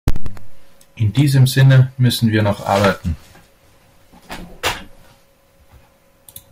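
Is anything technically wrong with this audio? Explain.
Yes. Hard clipping at 0.08 to 0.12 s and 1.18 to 2.90 s: peaks driven about 11 dB, then about 6 dB, past the limit are cut flat, adding harsh high harmonics heard as crackly fuzz on the speech.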